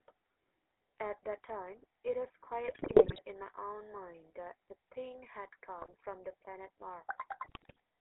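GSM full-rate codec coloring throughout this speech recording: the coder rebuilds the voice from a vocal-tract filter and sparse, regularly spaced pulses, giving a plainly audible buzzy, gravelly texture. The narrow band of about 300 Hz to 3.4 kHz and the character of the damage fit the 13 kbps full-rate coder. GSM bit errors occur at 2.68–3.20 s, 5.79–5.94 s and 7.44–7.80 s, where corrupted filter, pitch and gain values reach the decoder and break the voice into squawks, pops and gargling, frame by frame.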